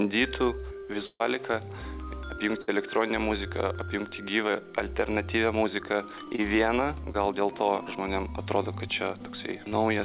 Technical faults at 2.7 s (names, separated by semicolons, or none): burst of packet loss